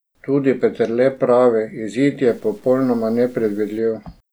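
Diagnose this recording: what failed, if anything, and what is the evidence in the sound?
From 2.28 to 3.78 s the speech turns grainy and rough, a distortion that follows the voice and collapses in quieter moments. This points to low bit depth without dither, likely from a sample-format conversion that truncated samples to about 8 bits. The waveform shows stair-stepped levels, and the spectrogram shows signal-correlated noise floor roughly 35 dB below the speech.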